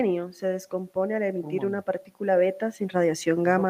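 No technical faults are audible.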